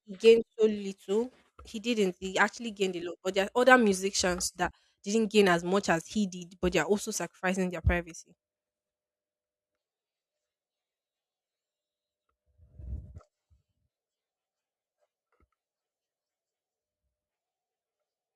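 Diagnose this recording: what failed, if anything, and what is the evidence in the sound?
Nothing failed here: I listened across the whole speech recording and there's nothing in the sound that points to a problem at any stage of the chain.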